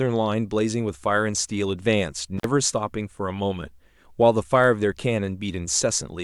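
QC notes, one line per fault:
2.37–2.46 s, intermittent contact: the speech drops out for about 53 ms with crackle at each edge as a loose connection briefly opens and recloses.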